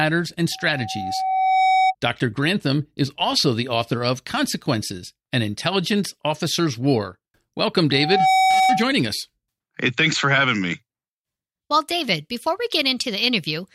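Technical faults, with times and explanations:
0.51–1.95 s and 7.92–8.93 s, loudspeaker feedback squeal: a steady 757 Hz tone swells over about a second the first time and under half a second the second, peaking roughly 5 dB above the speech, as the microphone re-amplifies the loudspeaker at the one frequency where loop gain exceeds unity.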